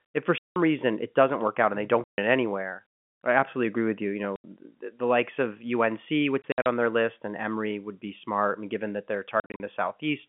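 Packet loss filled with silence cuts this telephone-band speech at 0.38–0.56 s, 2.04–2.18 s, 4.36–4.44 s, and in scattered bursts across 6.42–6.66 s and 9.4–9.6 s. Missing audio was replaced with digital silence, so each gap starts and stops abruptly. The hole lengths (180, 140 and 80 ms, and short runs of 40 to 60 ms in the later bursts) are multiples of 20 ms, which points to 20 ms packets.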